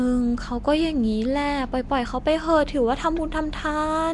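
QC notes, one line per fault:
Throughout, Nellymoser compression: the speech carries a rough, hissy halo and a smeared, underwater feel, with nothing above 10.6 kHz. Likely Nellymoser Asao. Its fixed bit budget starves the weak bands and fills them with noise, and the damage fits a 44 kbps stream.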